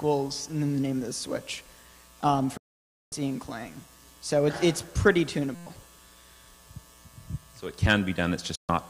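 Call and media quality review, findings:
Digital broadcast dropout, 2.57–3.13 s: audio fades out over 8 ms, then silence for 544 ms. Receiver muting after frames failed checksum; the gap fits about 17 lost frames of 32 ms. Second digital broadcast dropout, 8.55–8.70 s: same 8 ms fade, 128 ms silent, fitting four frames. Distinct from a hang loop: muted silence, nothing repeated, and the sent material does not resume where it stopped.

System hang loop, 5.55–5.67 s: a steady buzz at 172 Hz instead of the programme. The host or driver froze while the sound hardware kept replaying one 5.8 ms ring-buffer segment 20 times, which fits a 256-sample buffer. Roughly a tenth of a second is lost. Unlike a dropout, the gap is filled with repeated audio, not silence.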